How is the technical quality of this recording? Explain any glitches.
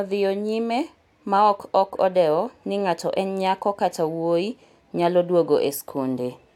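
No technical faults are audible in this speech recording.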